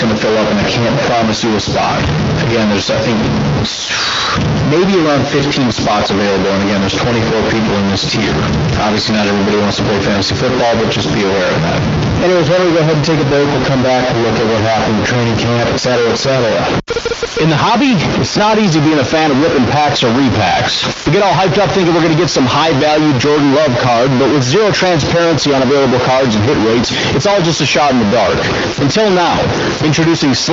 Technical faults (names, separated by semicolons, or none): stuck bit